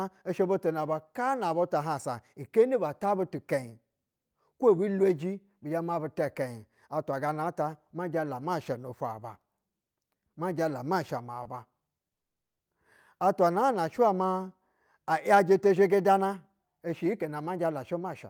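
Speech, with three network playback faults. At 11.43 to 11.48 s, just after "jala ma sha ma", there is a short stall from a late packet. The last sound is held about 20 ms too long. Nothing is lost, and the delay grows by that amount. At 12.14 to 12.61 s, after "ma sha ma ba", a call audio freeze drops the sound into 440 ms of silence. Then the audio resumes exactly where it stopped. Packets were likely held up in transit, so the jitter buffer ran empty. Nothing is missing, but the delay is now 440 ms longer. From 15.32 to 18.08 s there is a jitter buffer speed-up. The receiver trims short pitch-period slices again and again to shed the built-up delay. About a third of a second is removed. The speech runs at 110% speed at unchanged pitch and sounds hurried.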